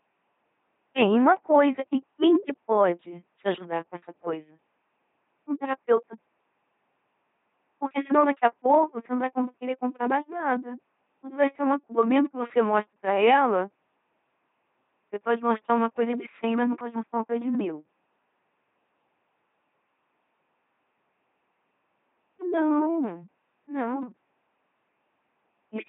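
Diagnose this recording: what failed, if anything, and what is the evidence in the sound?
Codec: an LPC-10 vocoder, consistent with 2.4 kbit/s, turns the speech throughout into robotic buzz or hiss from a pulse-or-noise-excited filter. The spectrogram shows harmonic combs with nothing above 3.8 kHz.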